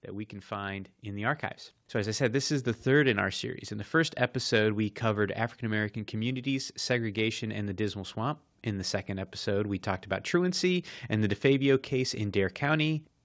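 From 0.05 to 2.47 s, automatic gain rising: the gain control judged the input too quiet and stepped it up by about 7 dB. Voice and background noise swell together over those seconds, unlike a speaker moving closer, settling just before "is the third in", over a call path whose band stops at 8 kHz.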